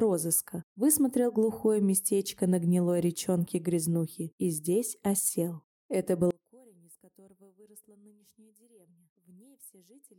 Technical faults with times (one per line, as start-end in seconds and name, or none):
6.31-10.19 one channel inverted